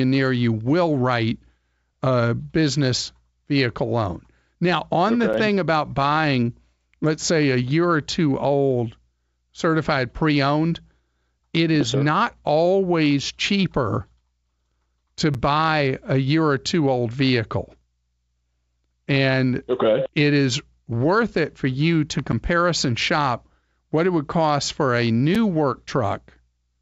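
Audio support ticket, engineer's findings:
Gap between chunks: stream delivered in 10-second chunks, playback likely resuming each one late, leaving about 7 ms of silence at 5.33 s, 15.34 s and 25.35 s (after "would cost for a"). Regular short holes, no content lost.

Block of digital silence: output buffer likely not filled in time, zeros written instead, abrupt cut. At 17.81 s, after "or two old vehicle", 2.7 ms, which fits a 128-sample buffer, heard as a tick. At 22.32 s, after "it for you to", 10.7 ms, which fits a 512-sample buffer, heard as a tick or dip. Both sit on top of the G.722 wideband path at 64 kbit/s.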